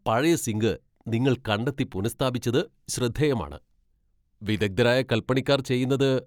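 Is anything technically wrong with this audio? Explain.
No, nothing technically wrong can be heard in this speech recording.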